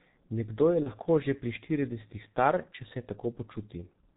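Throughout, the G.723.1 codec bands the speech below 4 kHz, consistent with roughly 6 kbit/s coding; it sounds muffled and hoarse, and a spectrogram shows empty space above 4 kHz. At 0.83 to 0.90 s, VoIP packet loss concealed by the speech codec replaces about 30 ms with an extrapolated buzzy tone or coloured noise that fades. The waveform dips, then recovers slowly.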